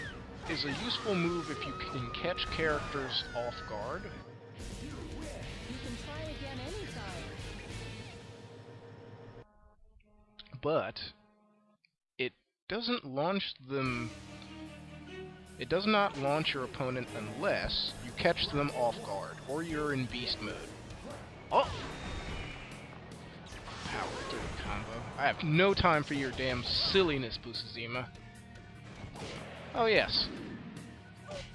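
No technical faults are audible anywhere in the audio.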